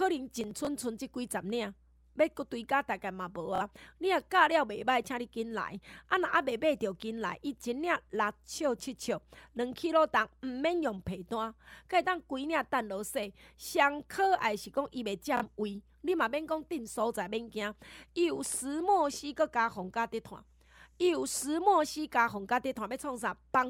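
From 0.41 to 0.67 s the speech is torn by processor overload crackle. The processor kept missing its deadlines for very short buffers, around 5 ms each, and roughly fifteen of them went unfilled and were skipped, leaving tiny hard-edged gaps. Heard together, they make a gritty tearing laid over the sound rather than a repeating pattern, and it stops once the load passes.

At 3.55 to 3.62 s and again at 15.37 to 15.44 s there is Bluetooth stutter. Each time, audio packets arrived lost or late and the receiver replayed its last short slice until fresh data came, giving a brief mechanical buzz. About 46 ms is missing each time, which fits two dropped packets, and the speech resumes further along as though it had kept playing. What separates it from the overload crackle is that the stutter repeats one slice identically at an even rate, while the crackle is irregular grit made of gaps.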